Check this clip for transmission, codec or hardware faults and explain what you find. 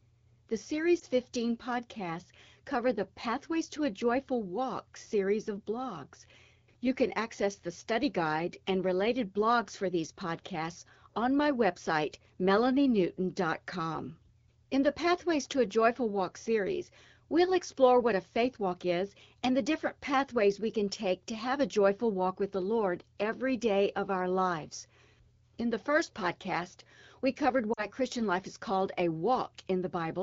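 Two brief dropouts come from lost AMR speech frames: one frame at 0.99 to 1.04 s, and two frames at 27.73 to 27.87 s, just after "first podcast we covered". The decoder discarded the corrupted frames and repeated the last good pitch and vocal tract settings at falling gain, so the sound briefly smears and dips. On a spectrogram the harmonics stretch flat and fade, and the waveform envelope sags briefly.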